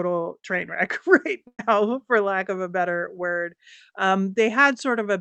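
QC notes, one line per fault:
1.47–1.61 s, burst of packet loss. Audio stopped arriving for about 0.13 s. The receiver held the last sound for about 113 ms and faded it, with about 60 ms of that fill silent. Playback resumes at "for lack of a", with about 120 ms missing.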